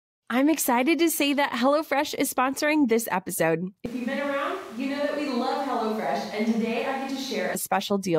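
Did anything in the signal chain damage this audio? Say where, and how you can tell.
Yes: 3.86 to 7.55 s turns abruptly roomy and hollow, likely a switch to a distant microphone; the spectrogram loses bass, and the waveform drops by about 5 dB.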